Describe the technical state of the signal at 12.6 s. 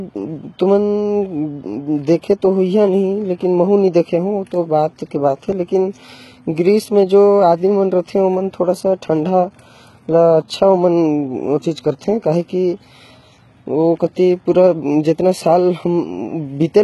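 At 12.6 s the treble of the speech sounds gritty and metallic, with s sounds turned lispy and nothing above 11.8 kHz. This runs through the whole clip and is likely HE-AAC compression, rebuilding treble from copied lower bands at a very low bitrate, near 16 kbps.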